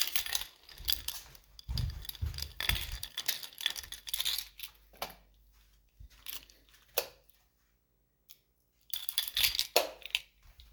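Everyday sounds here, and running under the whole thing there's a video or display buzz: a steady 59.94 Hz hum-buzz, the field rate of an NTSC-style picture, with a fizzy hash sitting on top and a thin whine at 15.7 kHz from the line scan. It's quiet, roughly 45 dB below the wanted sound, but it never lets up. A monitor or video cable was coupling into the audio path somewhere along the chain.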